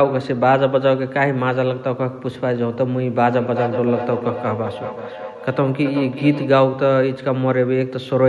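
From 3.26 s to 6.66 s the speech is caught in a feedback echo between two devices. A second device on the same call plays back what the first microphone sent, that microphone picks it up again, and neither echo canceller removes sound played by the other device. Each word returns at roughly 400 ms intervals, thinner and more ringing, with the loudest repeat about 9 dB below the direct speech.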